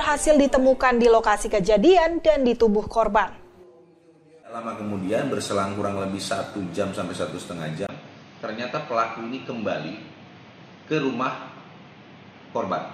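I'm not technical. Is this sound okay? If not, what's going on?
No. At 7.87 s there is a brief gap of about 20 ms, and from then until the end the sound turns duller and boxier. Everything above 6.6 kHz is gone, the level drops a little, and a faint new background noise appears. This is an input switched to a poorer device: the recording most likely jumped mid-way to a lower-quality microphone or a headset's call mode.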